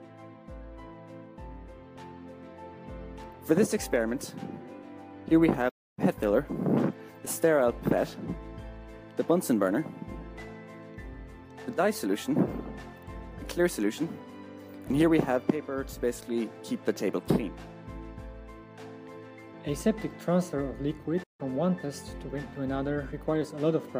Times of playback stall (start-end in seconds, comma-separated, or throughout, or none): 5.69-5.99, 21.23-21.41